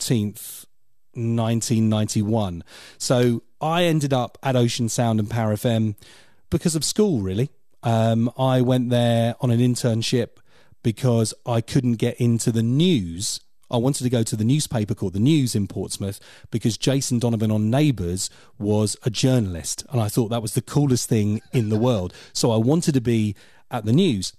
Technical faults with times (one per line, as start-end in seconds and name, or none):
none